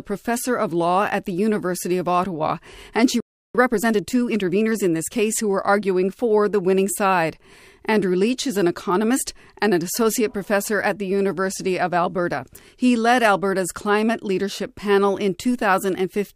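A playback stall at 3.20 s cuts this speech recording to silence for 0.34 s, until 3.55 s. The likely cause is the player running short of buffered data or its output thread being held up, so nothing reached the output until it recovered. Time-compressed catch-up follows from 3.55 to 5.83 s: the player trims the backlog by dropping and cross-fading small slices, so the speech runs about 1.15 times faster at unchanged pitch.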